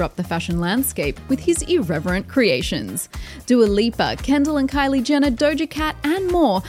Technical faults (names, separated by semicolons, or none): none